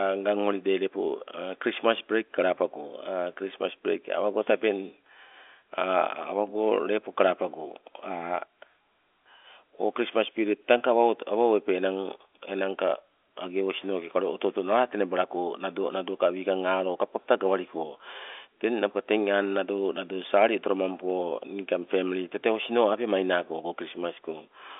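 The speech recording has no technical faults. It carries the narrow band of G.711 A-law telephone coding at 64 kbps, with the sound confined to roughly 300 Hz to 3.5 kHz and nothing present above 3.7 kHz.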